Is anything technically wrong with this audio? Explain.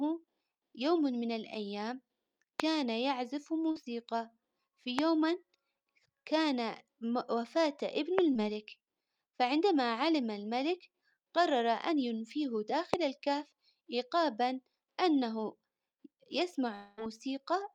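Yes, three kinds of fault can be heard in this speech.

Loud pops occur at 2.60 to 2.62 s, 4.99 to 5.01 s, 8.19 to 8.21 s and 12.94 to 12.96 s, each a single sharp click lasting about 20 ms and peaking roughly 20 dB above the speech. A sudden voltage step or pulse, likely from a switch, static discharge or driver glitch, was added to the signal, and the speech continues underneath. On a waveform each is a tall, narrow spike. On a spectrogram it is a thin vertical line spanning all frequencies.

Short concealed packet loss appears at 3.71 to 3.77 s, where about 40 ms of audio never arrived in time, and at 8.33 to 8.37 s, where about 20 ms was missing. The receiver covered each gap by extending the preceding sound and then blending back into the real audio. This is heard as a brief smear or wobble. On a spectrogram the harmonics or noise go flat and blurred for that instant. The waveform looks like a short repetitive patch.

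A long network dropout occurs from 16.75 to 16.99 s. About 220 ms of audio was lost, likely through a network interruption. The receiver filled the whole gap with synthesised continuation of the last sound, heard as a buzzy, fading extension rather than silence. Speech then resumes without the missing part. On a spectrogram this shows as frozen, smeared bands that lose detail. The waveform shows a repeating, decaying pattern instead of normal speech shapes.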